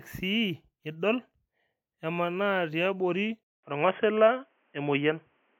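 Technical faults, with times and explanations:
3.43 to 5.60 s, input switched to a poorer device: after a 200 ms gap the speech goes dull and boxy, with nothing above 3.4 kHz, a level shift of about 5 dB and a new noise floor roughly 45 dB down, likely a jump to a headset or lesser microphone.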